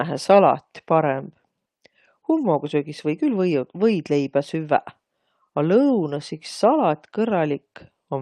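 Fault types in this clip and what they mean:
No technical faults can be heard anywhere in the recording.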